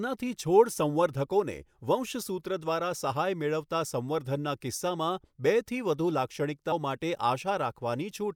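At 6.71 s the speech jumps ahead by about a tenth of a second, a classic case of compressed frames skipped. The gap sounds like a handful of frames, which fits a 24 ms frame length.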